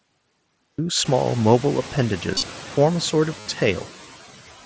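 From 0.00 to 0.79 s there is digital silence, and the audio then starts abruptly mid-sound. This cut-off start has no attack and no fade-in, which sets it apart from a gentle onset or a mid-clip dropout.

Throughout, noise suppressor artifacts pump the background down by about 11 dB between words and let it rise under them. A steady room hiss would hold its level instead.

At 2.34–2.43 s, concealed Bluetooth headset packet loss replaces about 68 ms of audio in short scattered gaps, the longest 30 ms, with a buzzy repeated tone at full level. At 3.40–3.46 s, about 60 ms is filled the same way, with a small warble as the real audio returns. A dropout would go silent instead of buzzing.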